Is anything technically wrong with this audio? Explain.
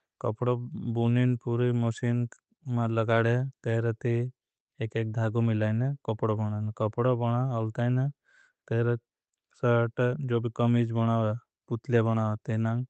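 No, nothing is technically wrong with this audio.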